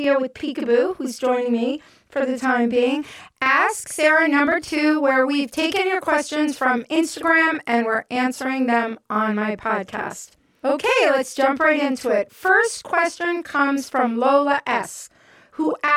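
Throughout, channel delay doubling: one channel lags 42.67 ms, which fits a 2048-sample buffer, so the mono sum carries a distinct equal-level slap rather than comb filtering.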